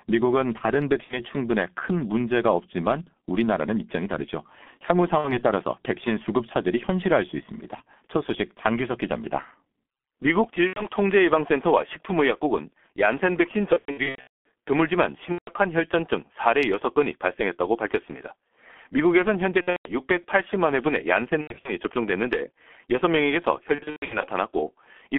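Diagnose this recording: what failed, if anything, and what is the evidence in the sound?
The codec stage is at fault throughout. The speech is muffled and hoarse, with blurred consonants, which fits a G.723.1 codec at roughly 6 kbit/s. A spectrogram shows nothing above 3.4 kHz or below 200 Hz, with smeared, blocky formant bands where the slow 30 ms frame model lags the speech.

The network stage shows VoIP packet loss concealed by the speech codec at 1.04–1.20, 5.18–5.42, 10.67–10.86, 13.73–14.45, 15.32–15.50, 19.61–19.93, 21.41–21.74 and 23.75–24.29 s. Each dropout turns into a buzzy or noisy stretch that fades away. On a spectrogram these stretches appear as frozen, flat harmonic stripes, and the waveform shows a decaying envelope. The decoder repeats its last pitch and filter while lowering the gain. The missing audio ranges from about 60 ms to about 540 ms, and the longest stretch, at 13.73–14.45 s, is broken up by partial recoveries.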